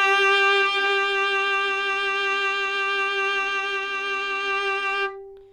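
No dropouts, distortion, clicks or other technical defects can be heard anywhere in this recording of sounds.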